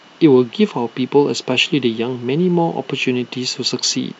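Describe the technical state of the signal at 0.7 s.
At 0.7 s the speech signal is intact, with no audible dropout, clipping, distortion or other fault at that point.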